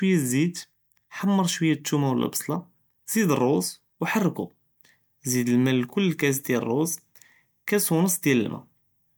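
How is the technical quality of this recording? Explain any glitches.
Nothing here sounds off: the speech runs along without a single glitch worth pointing out.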